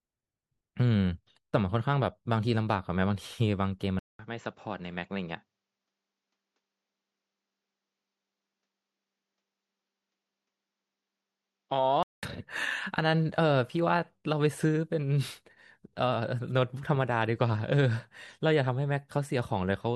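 At 3.99 s the speech drops out for about 200 ms, then comes back duller and a bit quieter, roughly 5 dB down, with nothing above 7.6 kHz and faint new noise sitting well under it. That's most likely the input switched to a poorer device, a narrower-band mic or headset path with its own noise floor. It stays boxy like that until 12.23 s, when the full, brighter sound returns.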